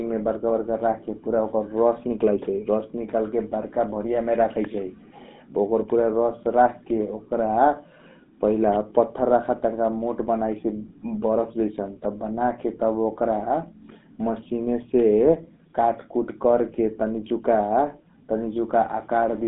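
GSM full-rate codec damage runs through the whole speech clip. Voice-tract modelling driven by sparse, regularly spaced pulses gives a plainly buzzy, gravelly texture, which fits the 13 kbps GSM rate. The band sits near 200 Hz to 3.6 kHz, with nothing above 3.8 kHz.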